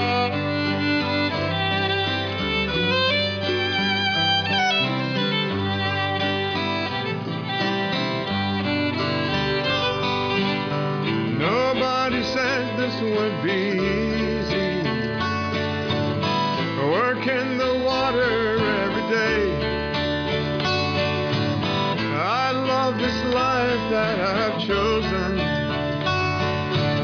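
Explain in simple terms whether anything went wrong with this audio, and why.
Listening to the whole recording, nothing stood out as having gone wrong with the audio.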